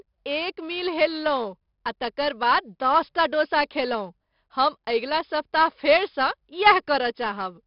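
A speech recording with a gritty hiss riding on every louder syllable and roughened consonant attacks throughout, plus a dull top with nothing above 5.3 kHz. This is heavy 4-bit ADPCM compression, whose adaptive step lags sharp onsets; the band limit fits roughly 44 kbps at an 11 kHz sample rate.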